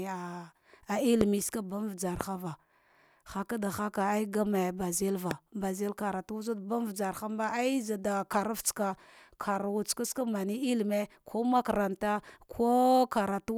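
Loud pops at 1.21, 2.21 and 5.31 s, each about 20 ms: single sharp thumps, roughly 20, 15 and 15 dB above the speech, likely from electrical pulses.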